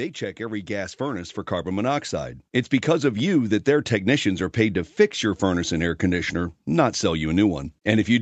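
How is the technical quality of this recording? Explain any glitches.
There's one real glitch here, early on. The audio has come through a call path with an Opus-style codec and tops out around 8 kHz, which is expected for a call.

From 0.18 s to about 2.4 s there's an automatic gain rise. The gain control decided the input was too quiet and kept turning it up, by about 8 dB in total. Because it's the overall level being pushed, the speech and the background swell together over those couple of seconds, so the start sounds like it's fading up.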